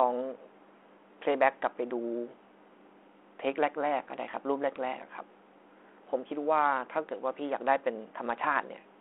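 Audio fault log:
No faults are present in this speech clip. The audio sits in a telephone band of roughly 300 Hz to 3.4 kHz, with a light coding texture on the speech that fits G.726 ADPCM at 32 kbit/s.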